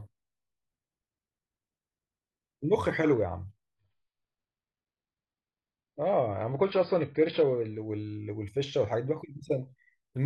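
At 3.76 s the speech suddenly goes dull and a bit watery, with no gap at all. That's an adaptive stream at a lower bitrate: the player switched to a cheaper version, likely because the connection slowed. For four seconds nothing comes through above about 5.1 kHz, and swirly codec artefacts creep in, which fits a drop from around 96 kbit/s down to roughly 16 kbit/s AAC. At 7.76 s the full treble snaps straight back.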